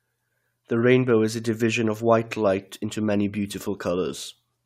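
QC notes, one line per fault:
No faults heard anywhere in the speech.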